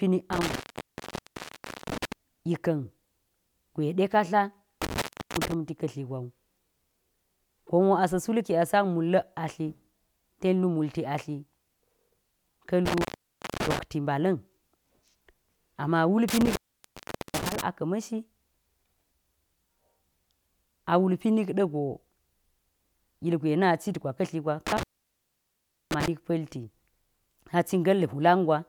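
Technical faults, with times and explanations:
0.33–2.12 s, 4.82–5.54 s, 12.86–13.79 s, 16.28–17.61 s and 24.67–26.08 s: intermittent contact. The speech drops out five times as a loose cable or plug connection momentarily breaks. The line stays open for about 1.35 s, 0.34 s, 0.56 s, 0.79 s and 1.08 s respectively, leaving faint hiss. Each gap is bracketed by crackle as the contact scrapes open and reseats.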